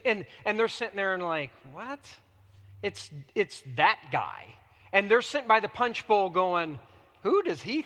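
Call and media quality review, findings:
No faults found in the speech; the Opus voice compression leaves only a light coding texture, consistent with a hybrid, fullband stream at around 20 kbps.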